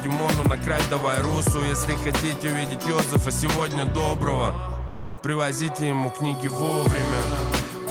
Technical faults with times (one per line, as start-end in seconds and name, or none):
4.87-5.17 sound dropped by the voice detector